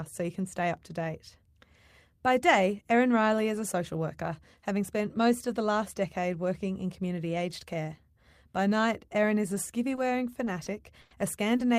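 From 9.95 s to 11.61 s, near the end of the speech, the audio shows repeated packet loss with a robotic sound. Five separate dropouts occur in quick succession, totalling 180 ms of missing audio, with the longest at 100 ms. Each gap is papered over by extending the preceding sound, covering about 11% of the stretch, and around a tenth of a second is rebuilt this way. The result is choppy speech with a robotic edge and audible holes.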